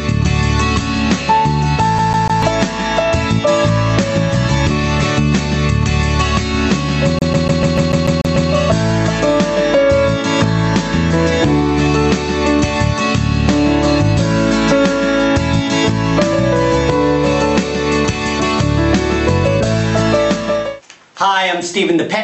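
Throughout the clip there is gain pumping, most likely from input gain set far too high with a fast limiter or compressor clamping each loud moment. The level swings by around 10 dB, ducking on loud sounds and swelling back in the gaps, so loud and soft parts sit squashed together.

From 1.99 to 2.43 s, and again from 7.19 to 8.51 s, the CD is stuck on one turn. The laser jumps back to the same spot each revolution, replaying a 0.15 s slice with a brief mute at every jump: three repeats first, nine the second time, an even, rapid stutter. The top end stops near 8 kHz, which fits the Opus call path it passed through.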